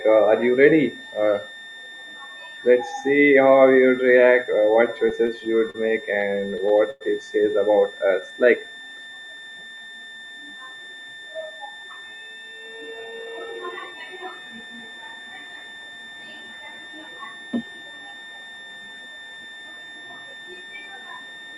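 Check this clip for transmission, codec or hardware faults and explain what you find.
Four faults are present: a constant high whistle and three separate timing disturbances from the receiver's jitter buffer.

A switching supply whistle runs through the whole clip, a thin tone between 1.79 and 1.81 kHz, roughly 20 dB below the speech. A switching power supply cycling at an audible rate leaks into the audio path. The tone wanders slightly in pitch, which sets it apart from a fixed mains hum or a steady test tone.

Repeated stalls (stutter) occur from 5.09 s to 7.03 s. Packets arrived late, so the playout buffer kept running dry, and the receiver held the last sound across thirteen small gaps. Together these gaps fill 242 ms, the longest 102 ms. Nothing is lost. The speech catches and drags in jerks, unlike the smooth stretching of a slow-down.

A jitter buffer slow-down runs from 8.07 s to 10.42 s. 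Running low on reserve, the receiver repeated single pitch periods many times in a row, adding 205 ms and playing at 92% speed. Pitch stays the same, so sounds feel drawn out rather than halting as in a stall.

A jitter buffer speed-up runs from 12.21 s to 14.67 s. After a backlog built up, the receiver trimmed short pitch-period slices repeatedly, removing about 0.3 s and playing at 111% speed. The speech sounds hurried but keeps its normal pitch, which distinguishes it from a sample-rate mismatch that would raise the pitch.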